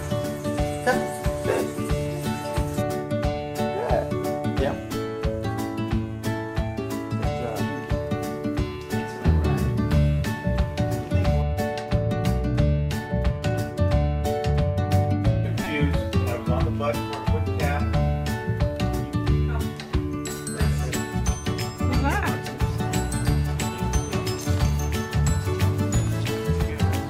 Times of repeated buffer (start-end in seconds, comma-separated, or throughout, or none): 15.64-15.66